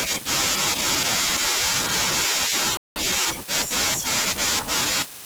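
At 2.77 s the speech just cuts out and the line goes dead for about 0.19 s, picking up again at 2.96 s. That's a playback stall: a hole in mid-flow, not a natural pause. The likely cause is the player starving for data or its audio thread getting held up briefly, so nothing reached the output until it caught up.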